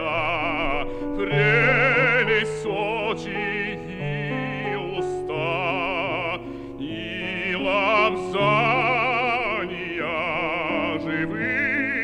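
Nothing in the recording registers as a technical fault.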